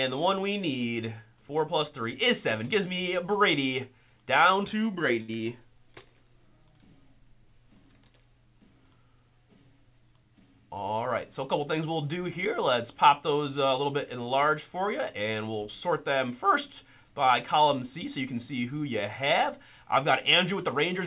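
A short stall from a late packet at 5.22 to 5.36 s holds the sound for about 63 ms: the jitter buffer ran dry, the last sound was stretched, then playback resumed without loss. Short concealed packet loss follows at 5.37 to 5.41 s, where about 20 ms never arrived and was filled by extending the preceding sound, leaving a brief smear. The audio came over a WebRTC call path, with nothing above 4 kHz, which fits G.711 mu-law.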